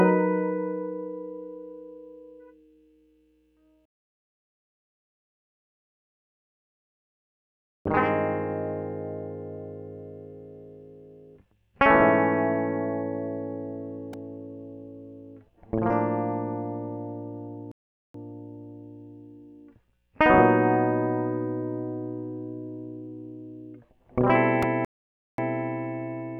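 A playback stall cuts the music at 17.72 s for about 0.43 s, and again at 24.85 s for about 0.53 s. The player likely ran short of data or was blocked, so output drops to silence mid-phrase before the music resumes.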